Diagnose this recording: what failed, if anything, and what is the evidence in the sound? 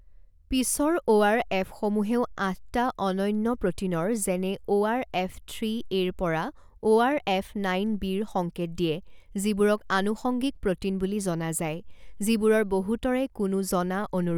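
Nothing in this speech recording points to a failure at any stage of the chain. No event anywhere in the audio calls for a diagnosis.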